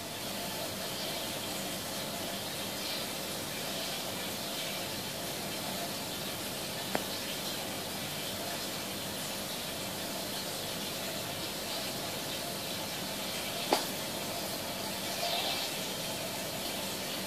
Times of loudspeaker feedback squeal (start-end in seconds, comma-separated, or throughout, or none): none